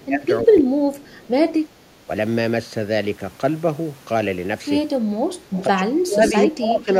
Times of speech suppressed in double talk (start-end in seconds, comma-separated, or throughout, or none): 0.00-1.32, 5.67-6.22, 6.47-6.89